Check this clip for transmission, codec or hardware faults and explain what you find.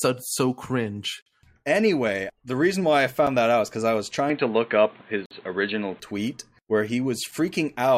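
The clip has two kinds of fault: recurring dropouts between stream segments, and a stretch where the sound goes narrow and dull.

Gap between stream segments: hard-edged holes of silence at 1.22–1.26 s, 3.27 s, 5.26–5.31 s and 7.31 s, lasting from about 5 to 50 ms. They land roughly every 2 seconds, which points to segment timestamps leaving small gaps that the player fills with silence, rather than lost audio.

Input switched to a poorer device: from 4.30 to 6.00 s the speech turns dull and boxy, with nothing above 4.3 kHz. The level shifts by about 5 dB and a new noise floor appears about 35 dB down. There's no silence at the switch. The likely cause is the input dropping to a narrower-band microphone or headset call profile, then recovering.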